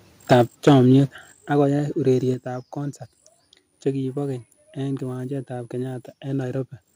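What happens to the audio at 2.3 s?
At 2.34 s the microphone volume is stepped down: speech and background both fall abruptly by about 5 dB in a single step and stay there. This is likely the call software cutting the device's input volume after judging it too loud.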